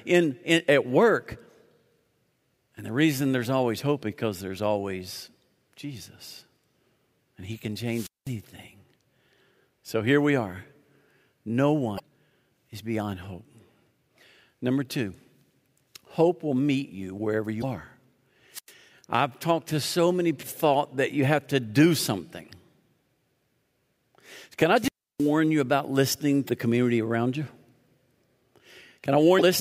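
At 7.89–8.36 s, hiss swells and the speech drops into about 0.2 s of near silence before returning. This is a wireless microphone squelch dropout: the analogue FM signal faded until the receiver's squelch muted the output. At 11.95–12.00 s a brief glitch marks damaged data in a compressed stream, where corrupted frames made the decoder lose sync and hunt for the next header. The same blip follows "will meet you wherever" at 17.60–17.64 s. Another squelch dropout at 18.52–18.72 s leaves a hole of about 0.1 s. A glitch at 20.39–20.44 s falls between "talked to so many" and "thought that you have". The longest dropout, at 24.73–25.35 s, mutes about 0.32 s just before "you about listening". Further corrupted-data blips follow at 26.45–26.50 s and 29.38–29.42 s.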